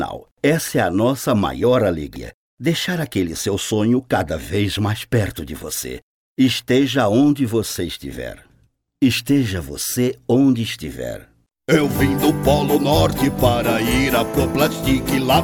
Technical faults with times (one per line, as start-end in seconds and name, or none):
2.16 damaged data in a compressed stream